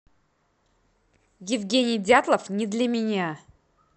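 From 0.95 to 2.94 s, speech runs 5.9% fast and a semitone sharp, likely a drift correction step; spectrogram harmonics jump up, then snap back.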